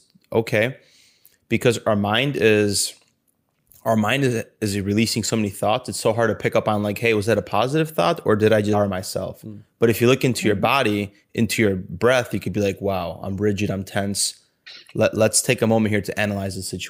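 Speech, with a skip ahead at 8.73–8.75 s after "thought or did i": roughly a second of audio is discarded and the two sides butt together with no silent gap, unlike a dropout. From 8.83 to 12.65 s, ending before "wow i'm rigid i'm", a jitter buffer speed-up trims pitch periods to run about 7% fast, removing around a third of a second. The pitch stays unchanged, so this is not a resampling error.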